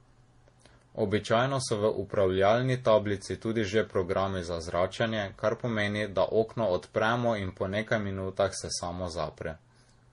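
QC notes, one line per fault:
Throughout, transcoding between lossy codecs: the speech carries a layered coding smear. Nothing is left above 10.6 kHz, so the top end is dull and sealed off. The MP3 coding artefacts sit on top of a second, different texture. That's likely an MP3 that was passed through another lossy format and then back to low-bitrate MP3. Each pass re-encoded the previous one's junk and added its own, so the damage stacks.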